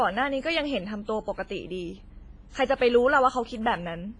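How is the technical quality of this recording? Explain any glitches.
The recording is degraded throughout by WMA compression, which is likely the cause of the whole clip's coloured, smeared quality. A transform codec of this kind works on long blocks, so the quantisation noise from coarse coding spreads across tens of milliseconds around each sound, and weak spectral lines are dropped outright. Here the damage is heavy: nothing remains above 10.4 kHz, consistent with a bitrate around 24 kbps. The speech rings and sounds washy, with a hiss that swells and fades along with it.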